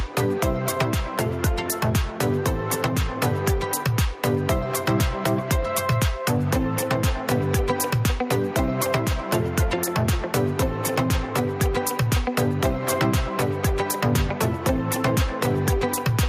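Gain pumping runs through the whole clip: loud and soft parts sit closer in level and the sound is squashed, with the gain swinging roughly 10 dB. The likely cause is a fast limiter fighting excessive gain.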